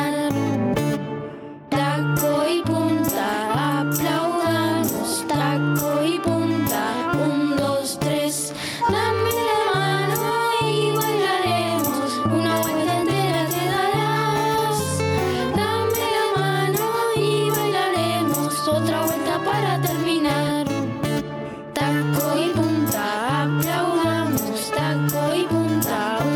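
The audio has gain pumping from start to finish. The level swing is large, somewhere around 15 dB. Loud and quiet passages sit much closer together than they should, and everything sounds squashed. The likely cause is input gain set far too high for the microphone, with a fast limiter or compressor clamping down on each peak and releasing in the pauses.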